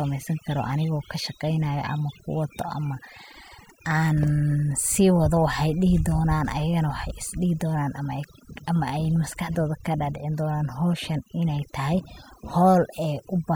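Throughout the speech, overdone noise removal pushes bands near its noise estimate far down, taking quiet parts of the voice with them. Unlike a noise gate, it leaves twinkling specks in near-silent background.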